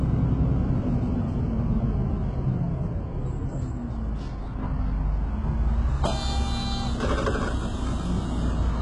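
From start to finish the treble has that fake sheen you get with HE-AAC compression at a very low bitrate, something like 12 kbps. The likely cause is spectral band replication: the upper range is rebuilt by copying lower bands upward under a rough envelope, so the top end sounds bright but doesn't track the real harmonics. Damage is heavy, with gritty, metallic edges on sharp high sounds and nothing at all above 11 kHz.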